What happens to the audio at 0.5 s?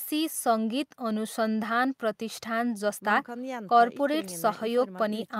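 Nothing goes wrong at 0.5 s; the audio is intact at that moment.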